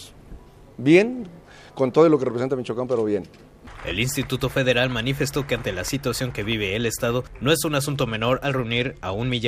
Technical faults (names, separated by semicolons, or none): Bluetooth SBC bit pool drop